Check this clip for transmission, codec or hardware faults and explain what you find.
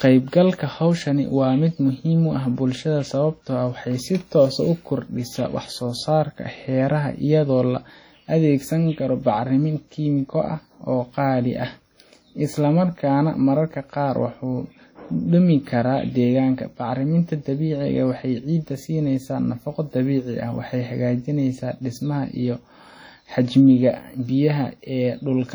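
One fault runs through the whole speech recording: heavy WMA compression damage. From start to finish the sound rings and turns washy, with a hiss that swells and fades with the signal. The likely cause is a Windows Media Audio encoder at a rate consistent with about 32 kbps. Its long transform blocks smear quantisation noise across tens of milliseconds and zero out weak spectral lines. On a spectrogram this appears as blotchy, gappy bands that still extend to 20.1 kHz.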